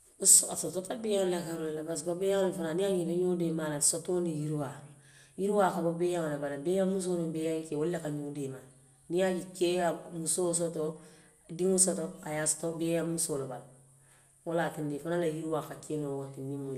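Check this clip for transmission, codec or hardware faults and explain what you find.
The speech carries one codec fault that runs throughout, generation loss.

From start to finish the speech sounds swirly and hollow, with smeared consonant attacks and no content above 16.5 kHz. The damage is heavier than a single lossy pass would leave, which points to the audio likely having been decoded and re-encoded around four times, consistent with MP2 at 96 kbit/s. Each pass requantises on a shifted frame grid, so the noise from every generation stacks up.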